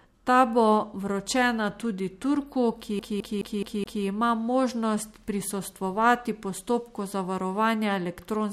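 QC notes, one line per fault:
2.99–4.05 s, CD stuck on one turn: the same 0.21 s fragment of speech plays five times in a row, with a brief mute at each jump, before the audio resumes at "ima možnost prisostvovati postopku". A scratch keeps throwing the laser back one track per disc revolution, giving a rapid, evenly spaced stutter. The spectrogram shows an identical block of harmonics tiled at a fixed 0.21 s period, and the waveform shows repeated envelopes separated by near-silent gaps at each seam.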